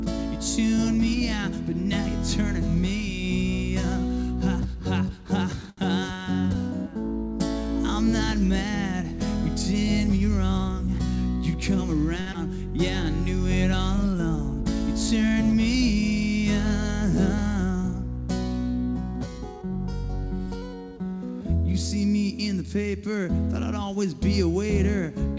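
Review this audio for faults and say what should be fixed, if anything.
Two short stalls from a late packet occur at 5.70–5.79 s and 12.21–12.28 s. The jitter buffer ran dry, and the receiver stretched the last sound by 75 ms and 54 ms until the packet arrived, so the held sound carries a slight buzz or dip. A slightly deeper jitter buffer target would absorb these arrival delays.

A skip ahead follows at 12.32–12.36 s. About 70 ms was dropped, either in transit or by the buffer when it overflowed, to catch up. Playback jumps forward with a near-direct splice and only a 21 ms fill. Smoothing packet delivery on the network path would avoid the loss or overflow behind this discard.

A jitter buffer speed-up runs from 19.56 to 20.55 s. The receiver removed short pitch-period pieces repeatedly to cut the excess delay, taking out roughly 70 ms in total. The sound plays at 106% speed at unchanged pitch and feels slightly hurried. 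Capping the compression rate so the catch-up spreads over a longer span would make the speed-up less noticeable.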